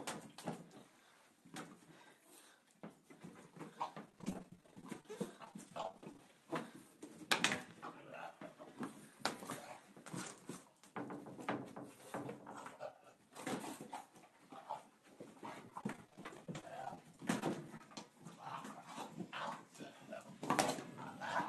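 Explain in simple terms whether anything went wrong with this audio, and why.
Something did go wrong, twice. Repeated packet loss (robotic sound) hits from 4.06 to 6.19 s and again from 15.70 to 17.98 s. Tiny chunks keep going missing. Each gap is patched by stretching the last sound, so it turns choppy.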